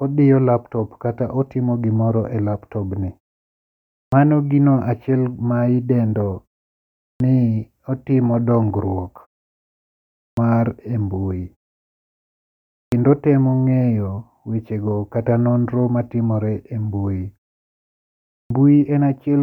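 Clipped start after a pause at 4.04, 7.12, 10.28, 12.84 and 18.41 s: the output wakes late after each silence, swallowing 80–95 ms, so onsets appear abruptly chopped, with missing leading energy on the waveform.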